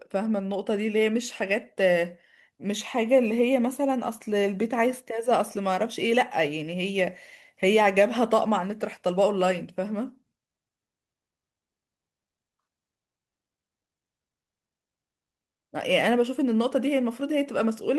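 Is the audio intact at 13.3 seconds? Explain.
Yes, at 13.3 seconds the speech plays through intact, with no dropout, click, distortion or other technical fault.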